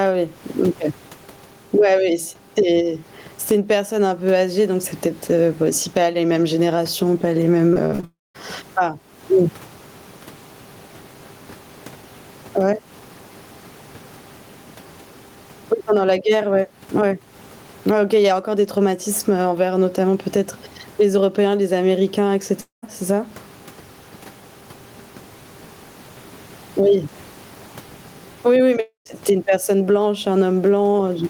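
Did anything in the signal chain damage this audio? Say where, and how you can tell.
Yes. The damage is in call processing and on the network.

Gain pumping runs through the whole clip. The room noise sits about 41 dB below the speech. The level swing is roughly 15 dB. Loud and quiet parts sound squashed together. The likely cause is gain set far too high for the microphone, with a fast limiter or compressor in the call processing pulling it down on every peak.

Repeated packet loss, heard as robotic sound, hits from 7.73 to 8.04 s. Four short holes open in that stretch, the longest about 64 ms. Each one is patched by stretching the last bit of sound, so roughly 42% of the span is synthetic. That gives a choppy texture with pieces missing. This is a network fault. Packets arrived late or not at all, and the receiver's concealment papered over the gaps.

A long network dropout follows straight on, from 8.04 to 8.36 s. 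Two more occur from 22.61 to 22.84 s and from 28.80 to 29.07 s. Each begins with a fading buzz or hiss continuing the last sound, then falls silent for 130 to 200 ms. The speech resumes with about 220 to 300 ms simply gone. The likely cause is a network stall long enough that concealment gave up.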